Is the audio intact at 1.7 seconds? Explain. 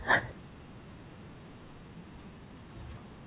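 No. Around 1.64 to 1.66 s playback jumps straight ahead with no gap, and roughly 0.7 s of speech is simply missing. This is a skip ahead: a stretch of audio was dropped while later audio was waiting, joining the two sides almost directly.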